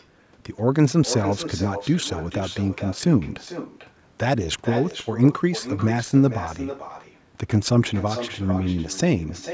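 From start to finish, every phrase of speech is shadowed by a delayed copy. This is echo with no canceller. The far end's loudspeaker feeds its microphone, and nothing removes the return. The copy arrives roughly 0.4 s late, about 12 dB quieter. It sounds thinner, and the call processing keeps nothing above 8 kHz.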